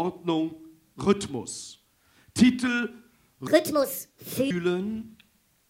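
From 3.47 s to 4.51 s a section plays at the wrong speed, running 1.55 times too fast, so pitch rises by roughly seven semitones and everything sounds hurried and shrill. The likely cause is that stretch being clocked at the wrong rate on playback or in editing.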